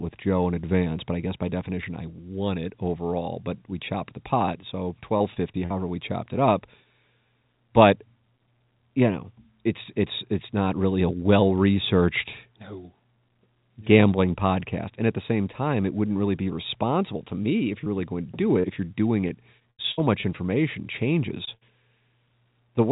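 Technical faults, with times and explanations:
5.18–5.72 s, repeated packet loss (robotic sound): Between "chopped the pot so" and "we chopped it up", four short holes appear, the longest about 41 ms. Together they total roughly 100 ms, about a fifth of the stretch. Each is patched by stretching the preceding sound, so the speech turns choppy. What separates this from a single dropout is the rapid succession of patches rather than one smear.
19.28–20.25 s, repeated packet loss (robotic sound): A longer run of seven gaps, the longest about 78 ms, adds up to roughly 220 ms missing. That is again about a fifth of the span filled with continued sound. The repeated fill-ins make the speech choppy across nearly a second. The call path is narrowband, with nothing above 4 kHz.
17.84–17.88 s, 18.60–18.66 s and 21.45–21.49 s, short concealed packet loss: The first falls just after "responsible to me if", the second just after "really going to do". 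Each is an isolated gap of about 20 to 40 ms. The receiver bridges it by extending the last sound and blending back in. Each is heard as a brief smear or wobble rather than a choppy stretch, and a short consonant can disappear.
21.55–21.63 s, burst of packet loss: About 60 ms of consecutive packets is lost, right after the short gap at 21.45 s. The receiver holds the last sound and lets it fade, so a held buzz or dwindling hiss replaces the speech before it resumes further on. It differs from the short losses by its greater length and audible fade. It differs from the robotic stretches by being one continuous hole rather than many.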